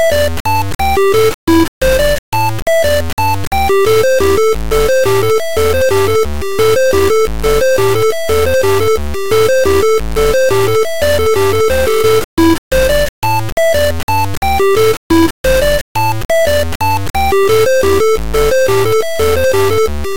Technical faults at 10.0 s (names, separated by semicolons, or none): low bit depth without dither